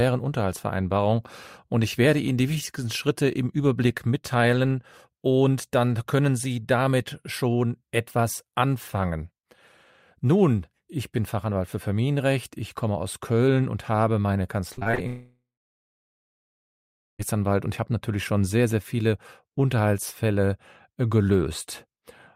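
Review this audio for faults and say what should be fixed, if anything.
Repeated packet loss (robotic sound) occurs from 14.73 to 14.99 s, right after "und habe meine". Five short holes, the longest about 37 ms, were patched by repeating the preceding sound, which covers nearly half the span and gives a choppy texture. On a spectrogram, the harmonics look smeared and stair-stepped, and the waveform shows repeated identical cycles. Jitter buffering and forward error correction on the network path would prevent this.

A long network dropout is the likely cause of the break from 15.07 to 17.21 s. The last sound stretches into a fading buzz or hiss, then about 1.7 s of silence follows, and the audio resumes at "und ich habe natürlich" with roughly 2.1 s of content missing. The waveform shows a decaying tail and then a flat line, and the spectrogram goes blank. A more stable connection or redundant transmission would prevent this.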